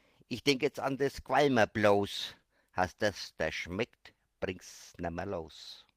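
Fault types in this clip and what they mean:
Nothing here stands out as a fault; the sound just carries on as it should, with nothing catching the ear.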